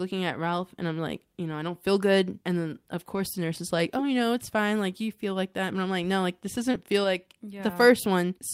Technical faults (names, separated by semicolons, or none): lost packet rebuilt from error correction; short concealed packet loss